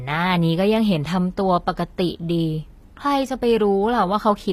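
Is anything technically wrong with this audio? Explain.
Yes. Throughout the speech, the treble sounds synthetic: s sounds come out gritty and metallic or lispy, and nothing is present above about 15.4 kHz. This is likely HE-AAC compression, with damage that fits a low bitrate near 24 kbps. The codec spent its bits on the lower spectrum and rebuilt the upper bands by copying lower content upward under a coarse envelope, so the harmonics no longer line up across the crossover.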